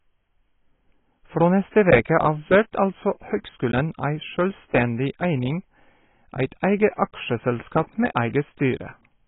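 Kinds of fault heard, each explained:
AAC compression: throughout, nothing above 3.8 kHz and heavy smearing, likely from AAC-LC coarsely quantising frames at a very low bitrate, leaving dull, muffled speech.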